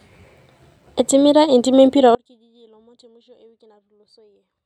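Speech cuts off abruptly at 2.15 s in an audio dropout to a faint residue that lasts to the end. Unlike a fade or pause, a faint leak roughly 35 dB down persists, likely because the source was lost while the downstream path stayed live.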